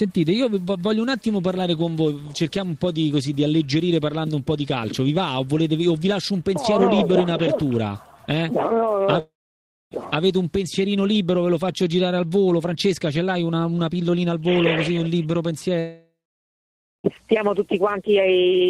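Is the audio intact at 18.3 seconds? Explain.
Yes, the audio is intact at 18.3 seconds, with no dropout, distortion or other fault at that moment.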